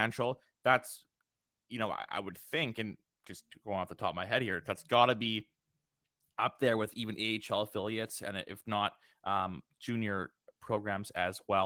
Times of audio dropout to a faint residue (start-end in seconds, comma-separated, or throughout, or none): none